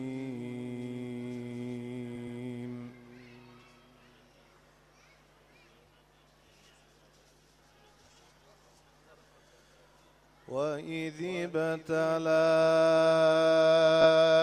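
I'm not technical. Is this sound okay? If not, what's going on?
No. There are two spots with repeated frames, where a short piece of the compressed audio was stored or sent more than once, so the player plays the same slice again. At 2.15 to 2.39 s, a 120 ms chunk plays three times in a row, a stutter, adding 240 ms. Near the end, at 14.01 to 14.06 s, a 20 ms sliver repeats twice more, heard as a brief stutter adding 40 ms.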